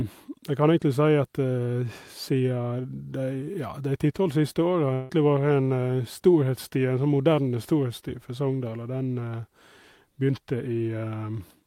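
Speech clip with a long network dropout from 4.93 to 5.11 s. The sound smears into a fading buzz rather than silence, likely a concealed packet loss, and about 160 ms is simply gone.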